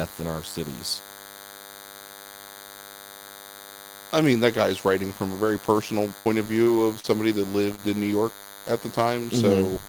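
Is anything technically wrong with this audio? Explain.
Yes. A DECT cordless phone buzz runs throughout: a nearby handset's radio bursts every 10 ms are rectified by the audio circuit, leaving a thin 100 Hz buzz with dense harmonics, roughly 20 dB under the speech.

A burst of packet loss follows "from a very personal" at 6.19 to 6.27 s. About 60 ms of audio is lost, and the receiver extends the preceding sound as a fading held tail before the speech resumes further on.

Short concealed packet loss occurs at 6.63 to 6.68 s, 7.00 to 7.06 s and 7.76 to 7.80 s. The decoder bridges each 20 to 40 ms hole with synthesised continuation, producing brief smears or wobbles.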